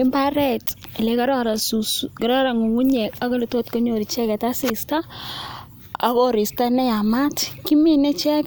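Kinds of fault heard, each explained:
No kinds of fault are heard in this clip.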